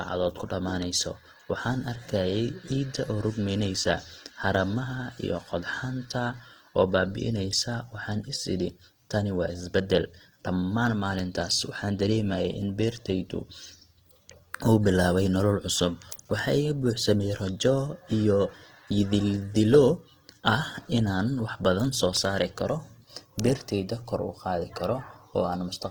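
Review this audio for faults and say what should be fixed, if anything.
Opus compression damage is plainly audible throughout the speech. Vowels sound grainy and rough rather than swirly, likely from music-mode Opus at around 16 kbps. A spectrogram shows content up to about 20.2 kHz with few holes, but noisy, speckled upper bands and blurred harmonics. Encoding at a higher bitrate, or keeping an uncompressed master for editing, would prevent it.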